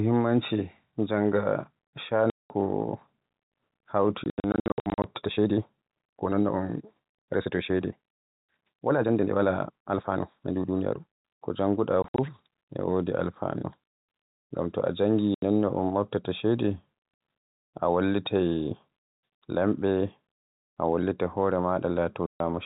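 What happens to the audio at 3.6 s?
Nothing goes wrong at 3.6 s: the speech passes through intact there, carried by the G.711 telephone coding with its usual band limit below 4 kHz.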